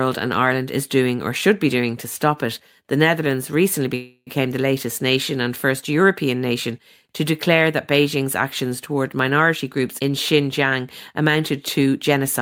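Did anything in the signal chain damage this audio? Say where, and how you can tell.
Yes. A call audio freeze runs from 3.95 to 4.29 s, just before "the latest nation and". The last sound is stretched into a fading buzz or hiss, with about 40 ms of silence, then resumes intact. It likely comes from network packets delayed long enough to empty the jitter buffer, adding 312 ms of delay.

Jitter buffer speed-up occurs at 10.79 to 11.37 s (105% speed) and 11.79 to 12.39 s (108%). The speech sounds hurried at unchanged pitch because the receiver trimmed repeated pitch-period slices, roughly 40 ms and 50 ms in total, to shrink an overfull buffer.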